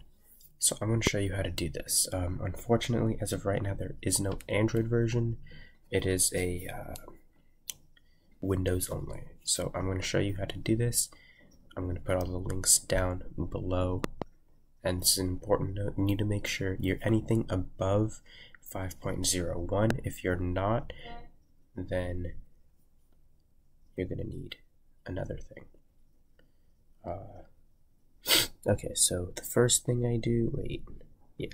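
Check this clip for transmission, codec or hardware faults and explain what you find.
There are hardware faults: three loud pops, at 1.07 s, at 14.04 to 14.24 s as a double pop, and at 19.90 s. Each is a sharp thump roughly 20 dB above the sound, likely from a voltage pulse such as a plug, switch or static discharge. Unlike a dropout, the sound carries on underneath without a gap.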